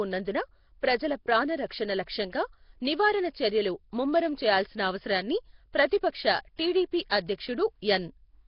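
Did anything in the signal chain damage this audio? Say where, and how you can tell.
Yes. The codec stage did it, likely Nellymoser compression at a very low rate: nothing survives above 5.3 kHz, and a hissy, underwater smear runs throughout.

Pre-echo comes from the same transform coding. Block-wide quantisation noise leaks ahead of sharp attacks, giving brief hiss at 6.56 to 6.59 s (24 ms) and 7.10 s.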